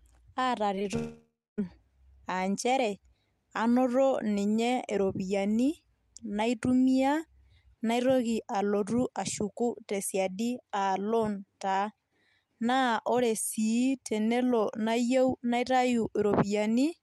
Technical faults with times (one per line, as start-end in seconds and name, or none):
0.75-0.86 short concealed packet loss
0.96-1.59 long network dropout